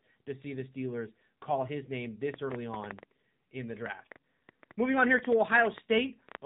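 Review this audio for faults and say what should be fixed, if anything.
The speech passes through the AMR narrowband mobile codec, so nothing above 3.8 kHz survives and the voice sounds buzzy and synthetic, which fits a low mode near 7.4 kbps. On a spectrogram everything stops at a flat ceiling. To prevent it, record or send through a wideband path.

A train of clicks runs from 2.34 s to 6.36 s, about 5.7 per second at an uneven pace, some twenty in all, peaking well above the speech. These are likely interference or a faulty connection. They show as thin vertical spikes on the waveform and full-height lines on a spectrogram. To prevent it, shield the cabling and check the interface.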